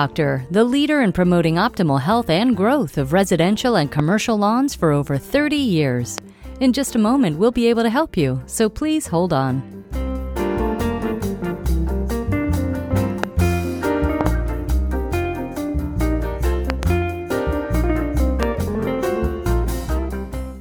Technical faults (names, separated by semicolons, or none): loud pop